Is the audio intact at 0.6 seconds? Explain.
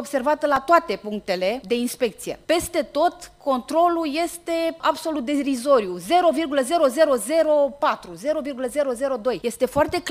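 No. At 0.56 s, new audio failed to arrive in time, so the device replayed its last tiny buffer twice more, a repeat of about 1.45 ms that fits a 64-sample buffer. This repeated buffer sounds as a brief click or buzz, with a few milliseconds of audio lost.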